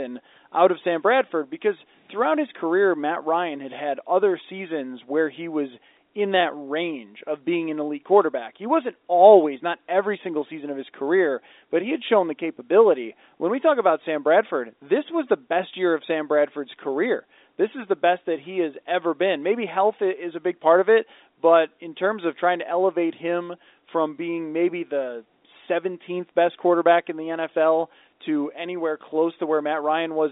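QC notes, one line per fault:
No faults found in this speech clip. The G.711 telephone coding is working as expected, holding the sound to the usual line band of about 300 Hz to 3.7 kHz.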